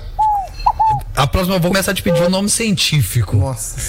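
At 1.70 to 1.74 s, compressed frames are skipped: the decoder drops whole frames, so the audio lurches forward by about a tenth of a second. The join shows as a discontinuity in the waveform and a brief vertical smudge on the spectrogram.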